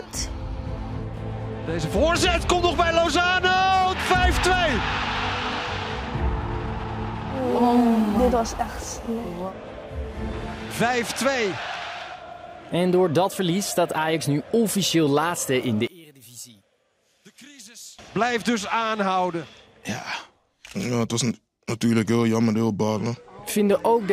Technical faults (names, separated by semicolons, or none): one channel inverted